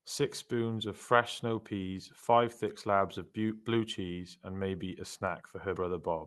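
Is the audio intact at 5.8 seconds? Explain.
No, there's a skip at 5.76 s where a small piece, roughly 50 ms, of the speech drops out and the two sides butt straight together. That's likely audio missing between chunks, with a piece lost at a 3-second chunk boundary.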